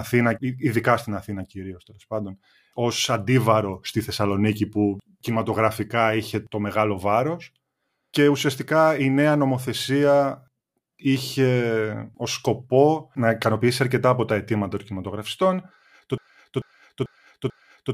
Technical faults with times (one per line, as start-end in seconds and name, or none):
16.18-17.93 broken-record loop